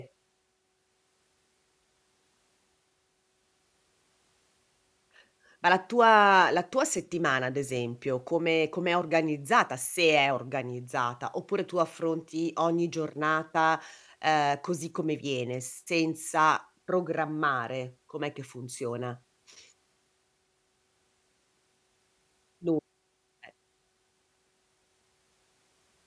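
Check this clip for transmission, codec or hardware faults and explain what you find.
Nothing wrong can be heard anywhere in this speech.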